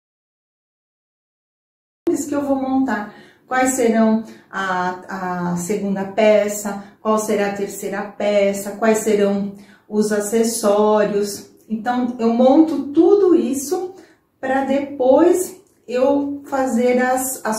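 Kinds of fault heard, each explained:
Audio dropout to silence: The clip opens in total silence that runs from the very start to about 2.07 s. Nothing is audible in that stretch, not even room tone. The gap is silence, not a quiet passage. The sound then arrives abruptly, already in mid-flow rather than fading in. Whatever happened before that point is lost. The likely cause is a lost input, such as a disconnected device, a failed link or a stray mute, while recording carried on.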